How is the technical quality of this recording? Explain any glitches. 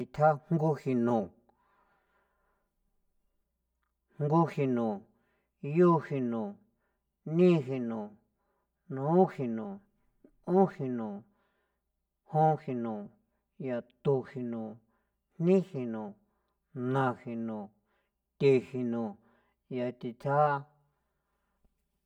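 The recording has one fault, present for its whole duration: channel delay (comb filtering). From start to finish the speech sounds hollow and phasey. One channel reaches the mix around 5 ms behind the other, and when the two are summed to mono, content common to both cancels where their phases oppose. That puts a fixed series of notches in the spectrum, the first near 100 Hz and the rest spaced about every 200 Hz above it. The result thins and colours the speech uniformly.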